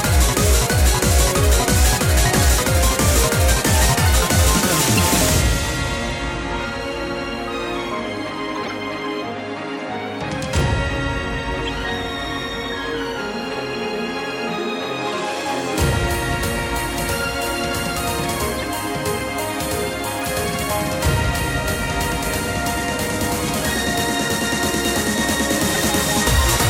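Damaged compressed frames were decoded rather than discarded, a corrupt frame decoded fault recurring seven times. Flipped bits scramble gains and spectral codes, so each hit spans a few frames of misplaced energy, heard as short chirps, blips or noise bursts: at 4.95 s, 8.55 to 8.71 s, 9.73 to 9.78 s, 11.64 s, 18.58 to 18.65 s, 20.19 to 20.25 s and 25.74 to 25.76 s. The loudest burst, at 25.74 s, peaks near -5 dBFS. The others range from about -10 to about -30 dBFS.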